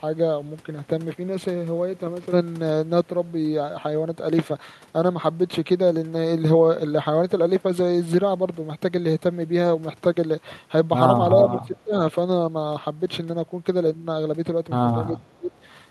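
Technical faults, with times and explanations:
11.37–11.95 s and 15.12–15.51 s, speech suppressed in double talk: the speech level suddenly sinks, by as much as about 20 dB, for roughly half a second in the first stretch and about 0.3 s in the second, so the talker seems to fade away and then return. The likely cause is both ends talking at once. The echo canceller could not tell this talker apart from the far end's echo and pulled everything down together.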